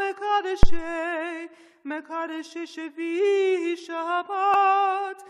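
At 0.63 s a deep, low thump lands and dies away over about 50 ms, with the disturbance lasting until roughly 0.85 s. This is a phantom power thump: a supply switched on or off on a live input sent a voltage step through the coupling capacitors.

At 4.54 s a brief blip breaks through the sound. It comes from damaged data in a compressed stream, where corrupted bytes caused the decoder to misread frames and lose sync before locking onto the next valid frame header.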